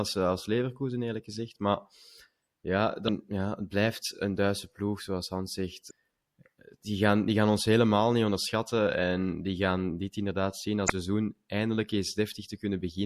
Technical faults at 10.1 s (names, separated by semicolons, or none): MP3 compression